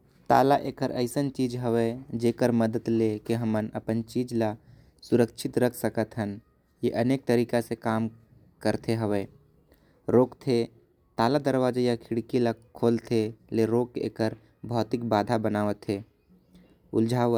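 Nothing goes wrong anywhere in this bit of speech, so there isn't a single fault to point to.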